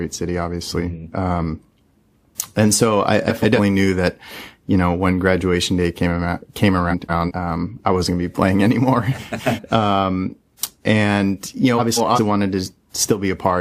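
This speech clip has frames out of order at four points. Two neighbouring blocks of audio play in swapped order, so each stretch sounds like a garbled flutter. The first runs 3.28 to 3.59 s, after "and so I", with blocks about 139 ms long. The others use blocks about 186 ms long: 6.90 to 7.32 s, after "day came around came"; 9.18 to 9.59 s; and 11.78 to 12.19 s, after "and you". No time is lost.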